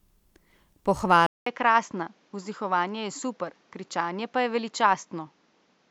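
Input likely switched to a poorer device at 1.26 s: after a 200 ms silence, speech turns dull, cut above 7.6 kHz, with faint new noise.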